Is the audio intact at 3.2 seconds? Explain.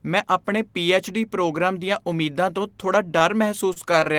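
No. From 3.19 to 3.32 s, just after "ਦੀਆਂ ਉਮੀਦਾਂ ਤੋਂ ਥੋੜ੍ਹਾ", there is a short stall from a late packet. The jitter buffer ran dry, so the last sound was stretched by about 18 ms until the packet arrived. Nothing is lost, but the sound is held too long. On a spectrogram the harmonics run flat; the waveform repeats near-identical cycles.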